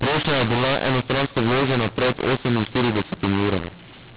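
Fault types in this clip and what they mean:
mu-law and A-law mixed up: the speech was encoded with G.711 mu-law but expanded with the A-law curve, so every 8-bit code maps to the wrong level for the whole clip. Some samples come out too loud, others too quiet, and near-silent ones jump well above zero, giving harsh distortion and noisy pauses. Unlike clipping, quiet passages suffer as much as peaks. Unlike hiss, it is a rough, level-scrambled grit inside the 4 kHz telephone band.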